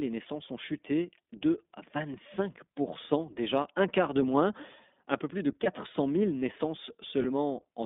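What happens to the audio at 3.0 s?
At 3.0 s, as throughout the clip, the speech carries iLBC codec damage. Each 20 ms frame is coded independently in a band of roughly 200 Hz to 3.6 kHz, fitting the 15.2 kbps mode. It sounds muffled, plainly rough and slightly synthetic.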